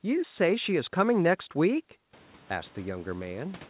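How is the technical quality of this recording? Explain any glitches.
The technical quality of this recording holds up, and there are no glitches to explain.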